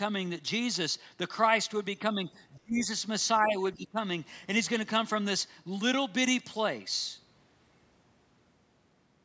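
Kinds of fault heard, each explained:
Speech suppressed in double talk: The talker's speech dips four times, likely because the echo canceller heard both sides at once and could not tell the talker from the loudspeaker echo. It then turned both down. Small, shallow dips come at 2.14 to 2.39 s and 3.42 to 3.55 s. The worst is at 2.55 to 2.87 s, where the speech falls by about 35 dB and nearly vanishes. Another clear drop, about 20 dB, follows at 3.75 to 3.97 s.
Other side's voice leaking through: A faint second voice slips into the microphone signal. The device plays the far side on its loudspeaker, and the echo canceller likely left some of it behind. A brief scrap appears at 2.83 to 2.87 s, about 25 dB below the talker, right at the end of the deepest dip. A longer patch at 3.39 to 3.52 s sits about 20 dB below. Both pieces are short.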